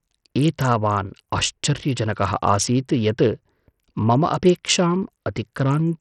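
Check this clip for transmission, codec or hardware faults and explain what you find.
One fault runs through the whole clip. The speech has a gritty, grainy texture, with the treble flickering in and out and a metallic aliasing sitting on the sound. Nothing is present above 14.3 kHz. This points to Bluetooth SBC compression, likely at a starved setting, since the damage is heavy enough to suggest a bitrate around 64 kbps. SBC splits the signal into a few wide bands and hands out bits crudely, so the upper bands lose their share and everything else is quantised coarsely.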